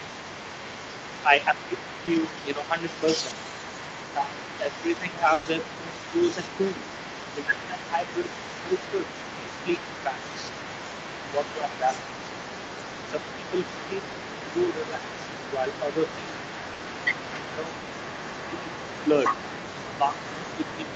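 Throughout the whole clip, a second voice sits behind the speech at about 15 dB below it. This is the other side's voice leaking through. The likely cause is a loudspeaker feeding the microphone, with the echo canceller leaving part of it in.

From 1.25 to 2.78 s, the speech is suppressed in double talk. The voice dips by roughly 15 dB. Both sides are talking at once, and the canceller likely turns everything down because it cannot tell the local voice from the echo.

At 2.05 s comes a short concealed packet loss. About 20 ms of audio never arrived. The receiver extended the previous sound to cover the hole, so there is a brief smear.

From 4.16 to 6.17 s, double-talk suppression pulls the voice down again, by roughly 15 dB.

Inside that stretch, from 5.33 to 5.47 s, there is a burst of packet loss. About 120 ms is missing. The last sound is held and fades as a buzz or hiss, and then the speech resumes further on.

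From 7.44 to 11.93 s, the voice ducks, by roughly 10 dB. At 8.21 s, another 20 ms concealed loss leaves a quick smear.

From 13.12 to 16.35 s, suppression returns at about 10 dB.

From 16.73 to 16.81 s, a shorter burst loses 60 ms and is papered over with a fading continuation.

From 17.5 to 18.72 s, the voice dips by roughly 10 dB. From 20.1 s to the end, there is a milder dip of about 5 dB. The audio carries nothing above 8 kHz, which fits the call's Opus coding.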